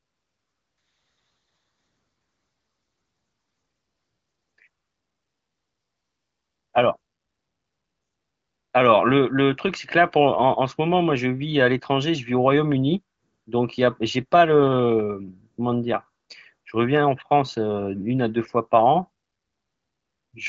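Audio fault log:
No faults are present in this speech clip. The AMR wideband (HD Voice) codec is audible as a band limit with nothing above 7.6 kHz and a light coding character, which fits a mid-to-upper rate around 16 kbit/s.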